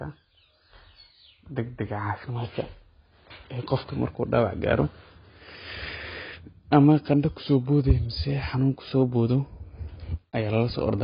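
Throughout the speech, nothing reaches above 5 kHz, leaving a hard ceiling on the spectrogram, with patchy, smeared bands below and a dull, warbling, fizzy texture. This is likely heavy AAC compression, fitting a bitrate around 16 kbps.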